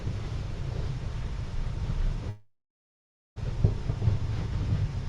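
From 2.29 to 3.38 s the audio stalls in a call audio freeze: the last sound is drawn out and fades, then about 0.88 s of silence, before resuming where it stopped with nothing lost. Likely cause: delayed packets emptied the jitter buffer, adding a 1.07 s gap.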